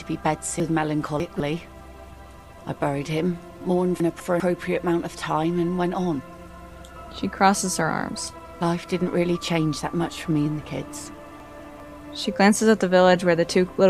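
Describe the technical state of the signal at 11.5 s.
At 11.5 s the signal is inside a chunks out of order fault spanning 11.4 to 11.8 s: one 200 ms block arrived a chunk late and plays after its successor. Nothing is missing, but the two blocks swap places, leaving three hard joins around a briefly jumbled passage.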